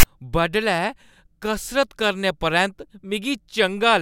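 From 0.00 to 0.03 s, right at the start of the speech, a short loud rasp with hard edges is heard. This is file tags played as audio: text metadata was decoded as sample values, producing harsh static offset to one side of zero.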